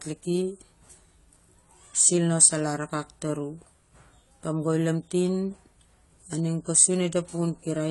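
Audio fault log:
Throughout, AAC compression: the speech sounds dull and smeared, with nothing above 11.4 kHz and a warbly, fizzy edge on sibilants. That's likely a low-bitrate AAC-LC encode, something like 32 kbps, dropping its cut-off and starving bands of bits.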